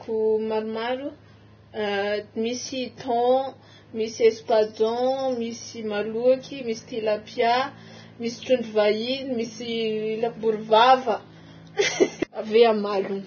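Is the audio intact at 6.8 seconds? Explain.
No, Vorbis compression affects 6.8 s as it does the whole clip, likely from very low-bitrate coding: nothing above 6.5 kHz, coarsely quantised treble turned to heavy hissy, grainy noise, with blurred attacks.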